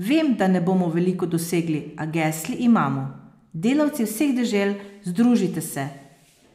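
No technical faults can be heard anywhere in it.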